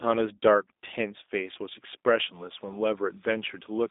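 G.729 codec damage runs through the whole speech clip. The voice is rebuilt from a vocal tract filter, a pitch predictor and a few pulses per frame, which fits an 8 kbit/s G.729A stream. It sounds plainly rough and synthetic, confined to a 250 Hz to 3.7 kHz line band with nothing above 3.8 kHz.

Timecode bleed enters at 2.34 s and lasts to the end. Linear timecode from an adjacent track or cable leaks in as a square wave flipping between tones near 1 and 2 kHz at 30 frames per second. It is a faint chirping warble, roughly 35 dB below the speech.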